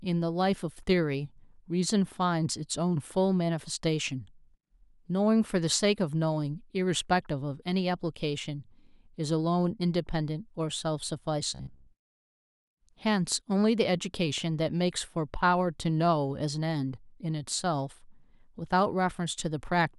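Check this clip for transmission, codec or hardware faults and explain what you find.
There's one fault here: robotic sound from repeated short buffers, from 11.55 to 11.88 s. For about a third of a second the speech collapses into a stiff, metallic buzz pitched at 66.7 Hz, loosely tracking the syllables underneath. That pitch fits a 15 ms chunk being replayed over and over, most of that stretch, while the fresh audio gets dropped. The likely cause is the playback side starving for data and looping its last buffer to fill the gap.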